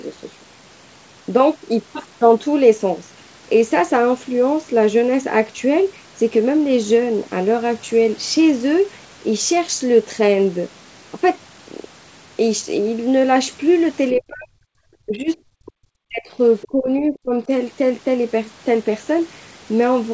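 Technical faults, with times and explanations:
14.14–14.20 s and 16.61–16.67 s, other side's voice leaking through: the echo canceller likely left residual loudspeaker echo, heard as brief faint scraps, about 35 dB and 20 dB below the talker.
14.15–14.57 s, 15.05–15.29 s, 15.59–15.89 s, 16.07–16.39 s and 16.66–17.49 s, speech suppressed in double talk: the canceller likely mistook overlapping talk for echo, ducking the talker by roughly 20 to 40 dB in choppy dips.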